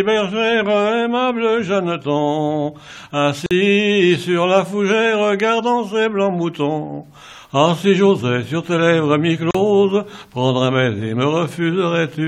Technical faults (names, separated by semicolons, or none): gap at a join of encoded pieces